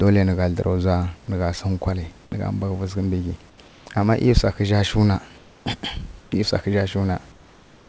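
At 2.24–2.32, 3.50–3.58, 3.68–3.86, 5.38–5.66, 6.22–6.32 s and from 7.32 s to the end, comfort noise replaces the background: the room hiss turns steady and featureless, about 1–3 dB quieter, likely from discontinuous transmission. Unlike a dropout or noise gate, the pauses never fall silent.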